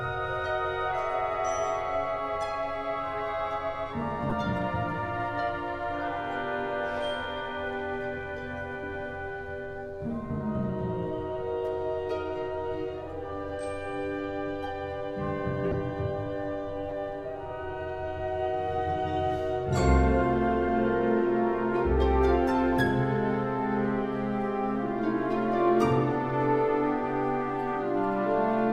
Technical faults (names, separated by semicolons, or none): corrupt frame decoded